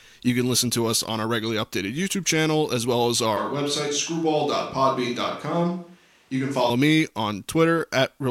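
Speech, with a switch to a distant microphone from 3.37 to 6.70 s. The sound abruptly turns roomy and hollow, about 5 dB quieter, with thinner bass and faint room noise. The waveform steps down and the spectrogram's low end thins, likely because the close microphone failed.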